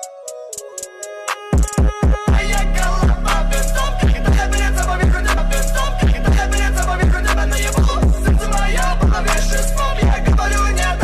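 From 5.37 to 7.36 s, a stream segment repeats: about 2.0 s of audio plays twice as the player queues one segment again. The waveform shows an identical block with a small discontinuity spike at the jump.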